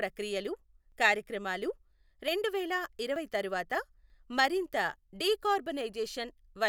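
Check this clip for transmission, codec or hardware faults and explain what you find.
There are five short skips in the speech, at 0.92, 2.28, 3.16, 4.1 and 5.2 s. Each is a small jump ahead, with no gap. That's likely a dropped buffer (overrun): roughly 20 ms of samples got overwritten before being read, about twice that at 4.1 s.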